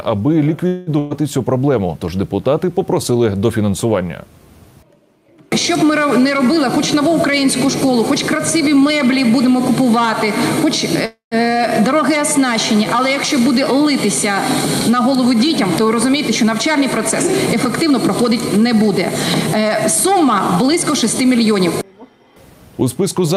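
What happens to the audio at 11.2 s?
A call audio freeze spans 11.05 to 11.35 s, likely from delayed packets draining the jitter buffer. The last sound stretches into a fading buzz, then 140 ms of silence, seen as smeared horizontal bands dying into a blank column. Audio resumes intact, 261 ms late.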